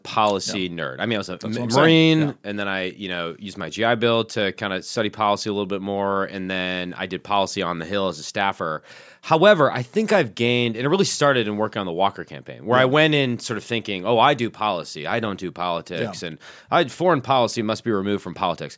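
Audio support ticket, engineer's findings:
No faults found on listening; speech path behaves as expected, nothing to action.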